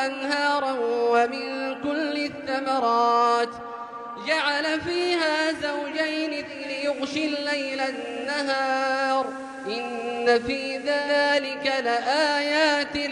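From 6.42 to 11.2 s, hiss rises: digital radio blending to analogue, a 358 ms cross-fade onto FM.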